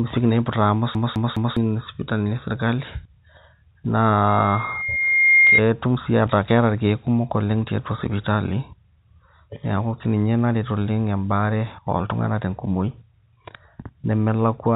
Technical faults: CD stuck on one turn; loudspeaker feedback squeal

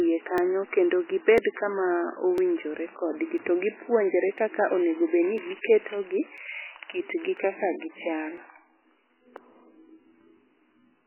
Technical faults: MP3 compression; periodic USB or driver dropouts

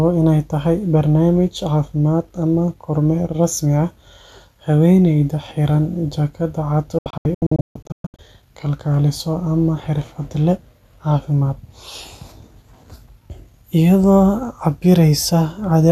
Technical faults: digital broadcast dropout

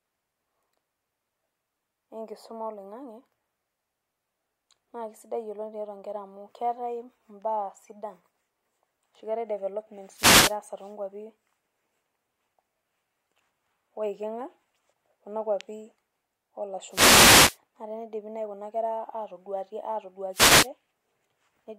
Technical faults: wireless microphone noise hit

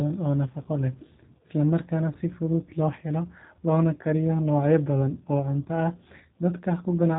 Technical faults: G.729 codec

